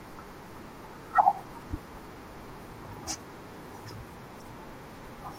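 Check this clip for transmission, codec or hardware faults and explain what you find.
Two short codec glitches appear in the speech. Corrupt frame decoded, at 2.91–2.95 s and 4.40–4.42 s: brief chirpy blips, the first around -30 dBFS and the second fainter, where damaged compressed frames were decoded anyway, misplacing energy.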